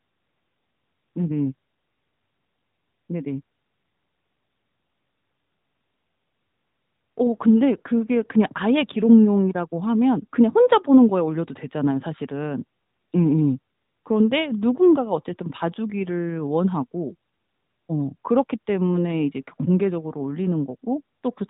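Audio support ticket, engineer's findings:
No faults found in the speech; band-limited to 4 kHz by the AMR-NB narrowband mobile codec path, light coding texture consistent with its highest 12.2 kbps mode.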